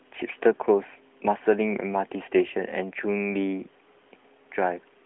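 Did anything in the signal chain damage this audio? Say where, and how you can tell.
No, nothing damaged this audio.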